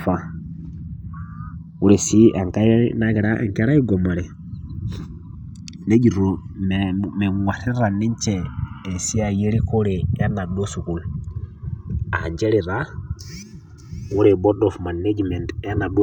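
Channels drifting apart runs throughout this speech recording: the two channels come from devices on clocks disagreeing by roughly 150 ppm, so their offset slides to around 3 ms by the end, and summed to mono the comb notches sweep slowly, heard as gradual flanging.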